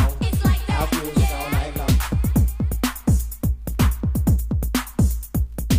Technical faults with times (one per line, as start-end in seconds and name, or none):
none